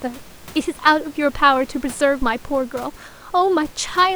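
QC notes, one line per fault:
2.22–2.34 s, phantom power thump: a deep, low-frequency thump breaks into the speech and dies away quickly, with a decay of about 26 ms. Switching a supply on a live input puts a sudden DC step on the line. The coupling capacitors pass that step as one low pulse that then drains away, which is why it is heard as a single short, deep bump. The room noise sits about 24 dB below the speech around it.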